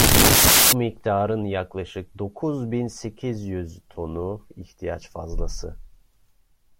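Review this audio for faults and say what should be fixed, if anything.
From 0 to 0.73 s the speech is buried under loud, harsh broadband noise. This is samples built from the wrong bytes. The reader assembles each sample incorrectly. It may be off by one byte, swap the byte order, or assume the wrong alignment. The fast-changing low bits then land in the high part of each value. That produces the harsh noise. To prevent it, fix the reader to use the file's true byte order and sample alignment from the first byte.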